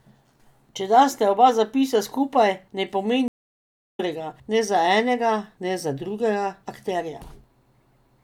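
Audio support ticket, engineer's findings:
Stream reconnect, 3.28 to 4.00 s. Speech drops out after "oba zapisa skupaj ne", silent for 680 ms. Resumes at "ne za enega ne", about 0.7 s further on; that stretch is lost. Probable component: network connection and player. Link broke, client reconnected, fresh decoder joined the live stream mid-flow.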